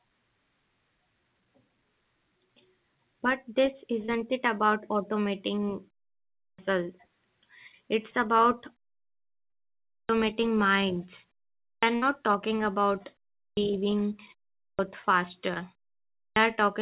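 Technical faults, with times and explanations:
4.06–4.10, 8.10–8.14, 9.50–9.54 and 15.54–15.58 s: short concealed packet loss. About 20 ms of audio arrived too late each time, just before "it about automating" in the first case. The receiver extended the preceding sound and blended back, leaving a brief smear or wobble.
6.38, 9.89, 11.65, 13.39, 14.59 and 16.16 s: clipped start after a pause. After silences of 0.3 to 1.2 s, the output device needed time to wake, so roughly 0.18 to 0.21 s of each onset is lost. The first is after "it about automating" and the fourth after "talking about". Speech begins abruptly with its opening sounds missing.
11.96–12.04 s: burst of packet loss. About 60 ms went missing in a row, just after the 11.65 s clipped onset. Concealment held and faded the last sound into a short buzz or hiss before the audio resumed further on. It is longer than the short concealed losses.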